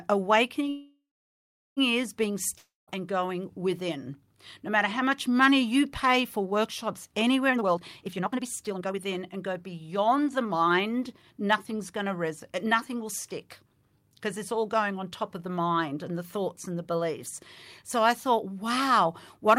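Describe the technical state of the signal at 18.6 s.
At 18.6 s the signal is intact, with no audible dropout, distortion or other fault at that moment.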